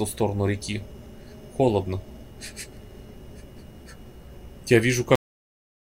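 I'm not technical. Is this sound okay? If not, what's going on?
No. This is a cut-off end: the final stretch of audio was never saved or played, so the sound stops abruptly mid-way at 5.15 s, followed by dead silence.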